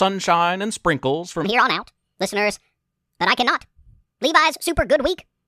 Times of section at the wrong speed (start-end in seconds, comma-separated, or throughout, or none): 1.44-5.48